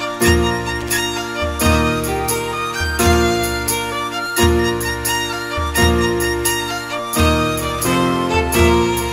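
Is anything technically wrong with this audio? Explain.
Yes. Loose connector crackle appears at 0.81 to 0.90 s and 7.65 to 7.95 s: a dirty contact rapidly makes and breaks, chopping the signal into irregular scratchy bursts, seen as jagged dropouts and broadband vertical streaks.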